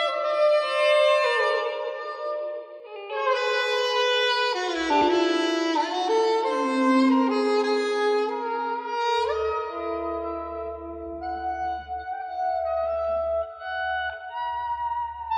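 Right from the start the audio has a doubled audio track: a second, full-band copy trails the original by around 150 ms at about the same level, so everything sounds smeared and stuttery, with none of the decay or room colour a real echo would have. It's already running when the clip opens and cuts off abruptly at 2.80 s. That's likely a second capture through a slower path or an edit leaving two copies out of step.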